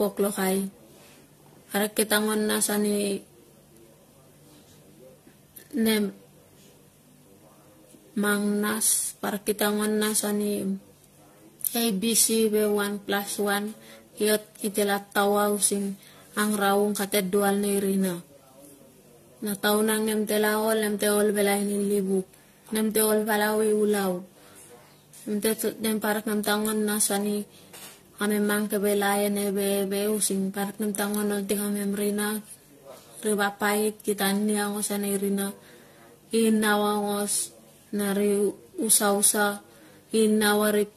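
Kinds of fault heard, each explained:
Generation loss: the speech sounds swirly, smeared and hollow throughout, more damaged than a single pass at around 64 kbit/s would leave, with nothing audible above 14.2 kHz and consonant attacks blurred. This is likely from the audio being decoded and re-encoded through AAC-LC about seven times, each pass quantising on a shifted frame grid so noise and spectral holes accumulate. A single low-bitrate encode would sound thin but steadier, without this compounded, churning texture.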